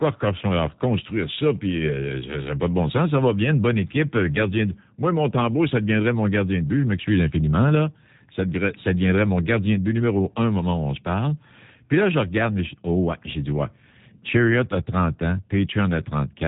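Speech heard throughout through the G.729 codec: nothing passes above about 3.8 kHz, and the voice has a plainly audible rough, buzzy, synthetic edge that fits an 8 kbit/s G.729A link. A plain band-limit would leave the voice smooth, but this roughness comes from rebuilding each frame with a few coarse pulses.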